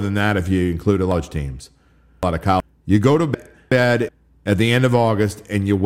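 Just after "if you include a", from 1.12 to 2.60 s, the speech jumbles: chunks out of order. A block of about 0.37 s was delivered late and plays three chunks after its proper place, with three hard joins. A second swap follows "go to", from 3.34 to 4.09 s, where one chunk trails its neighbour before "at the end". The waveform shows abrupt discontinuities at each join, and the spectrogram shows vertical broadband lines and formant tracks that break off and restart out of sequence.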